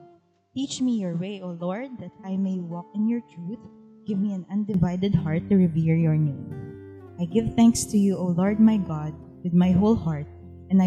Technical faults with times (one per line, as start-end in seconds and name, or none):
0.00-4.74 input switched to a poorer device